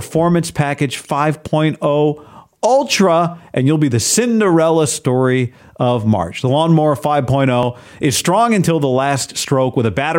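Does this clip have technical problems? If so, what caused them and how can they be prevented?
Yes. Two quick small jumps, at 7.63 s just before "is strong until the" and at 9.48 s, each skipping roughly 10 ms, likely dropped buffers (overruns). Bigger buffers or higher capture-thread priority should stop it.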